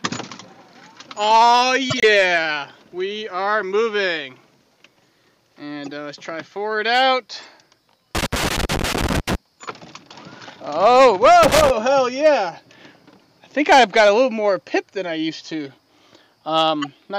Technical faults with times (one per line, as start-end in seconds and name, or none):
1.90-2.04 corrupt frame decoded
5.84-5.90 corrupt frame decoded
8.15-9.35 loose connector crackle
11.43-11.70 loose connector crackle
15.67 corrupt frame decoded
16.82-16.87 corrupt frame decoded